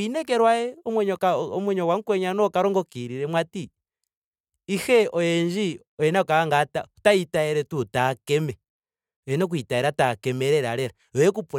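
At 1.19 s the speech skips briefly: an overlap between stream segments trimmed about 6 ms of real audio, so the waveform jumps discontinuously.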